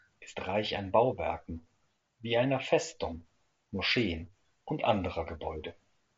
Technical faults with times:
none

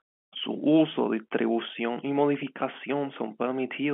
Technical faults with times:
none

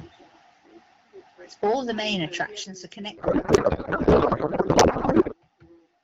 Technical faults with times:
1.49-2.42 microphone overload
1.64 microphone volume stepped down
2.64 microphone volume stepped down
3.17-5.34 codec payload misread

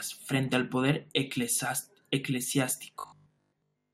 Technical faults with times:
3.00-3.94 robotic sound from repeated short buffers

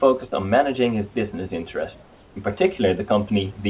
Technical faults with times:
2.02-2.36 comfort noise in place of the background

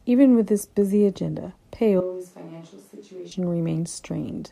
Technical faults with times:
2.00-3.31 switch to a distant microphone

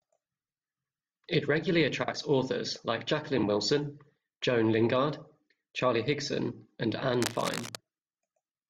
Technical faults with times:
2.03-2.13 frames out of order
3.37-3.43 frames out of order
7.22-7.76 cable scratch noise

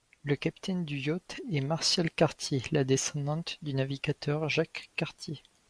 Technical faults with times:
none

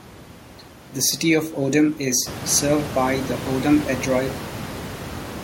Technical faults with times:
none

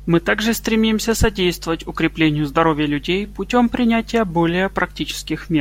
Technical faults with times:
0.00-5.60 mains hum

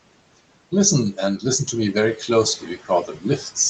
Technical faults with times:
0.00-3.69 noise suppressor artifacts
2.58-3.56 speech cut by the noise suppressor

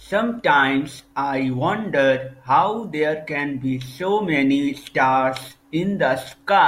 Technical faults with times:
none

